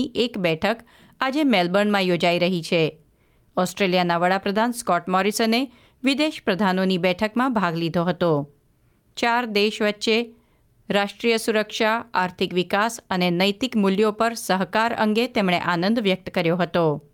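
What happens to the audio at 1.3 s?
Nothing goes wrong at 1.3 s; the audio there plays through intact, with no dropout, click, distortion or other fault.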